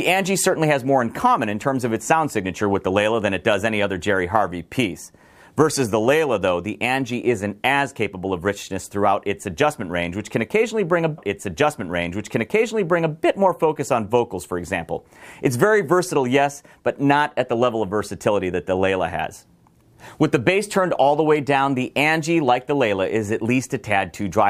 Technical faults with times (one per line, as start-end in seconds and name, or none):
11.17-13.17 stream segment repeated